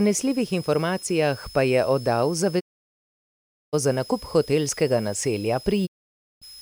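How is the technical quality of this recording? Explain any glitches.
The recording has two problems: a steady high whistle under the speech and two complete dropouts.

A switching supply whistle runs through the whole clip. A switching power supply is cycling at an audible rate, or two supplies are beating against each other, and the result leaks into the audio path. It sounds like a thin, high tone near 5 kHz, wandering between about 5.01 and 5.25 kHz. It sits roughly 20 dB below the speech.

There are two digital broadcast dropouts. The first runs from 2.59 to 3.75 s, right after "pa je oddal". The second runs from 5.85 to 6.44 s, after "hotelskega naselja". Each time the receiver lost the signal, or received frames that failed their checks, and muted until good data returned. The sound fades out over about 20 ms and goes silent for 1.12 s, then for 0.54 s. Whatever was said in those gaps is gone.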